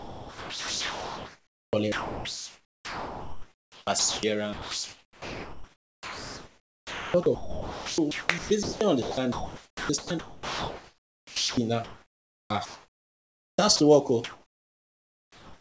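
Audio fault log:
0.00–4.23 s, 4.53–11.57 s and 11.84–13.79 s (ending just before "to work"): sound chopped by the voice detector, likely a voice detector gating; about 3.9 s, 6.0 s and 1.6 s become synthetic fill.
14.24–15.58 s: comfort noise in place of the background, likely discontinuous transmission; the real background, about 35 dB down, becomes steady featureless hiss, barely 1 dB different.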